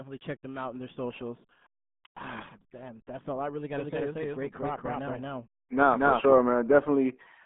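From the first moment, the speech carries the sound of the RealAudio 14.4 codec. The band runs only from about 150 Hz to 3.6 kHz, and nothing above 3.8 kHz survives. The damage is heavy. Consonants blur, and vowels turn muffled and gargly. This is what happens when a coder squeezes speech into a tiny data rate, and it fits a stream of about 8 kbit/s.

At 3.77 s, just after "all I really got", a doubled audio track begins. A second, full-band copy of the speech trails the first by roughly a fifth of a second, at about the same level. It has no decay and no room colour. It simply repeats, giving a flat stutter. The copy cuts in and out abruptly and stops at 6.33 s. The likely cause is the same audio being captured again through a slower path.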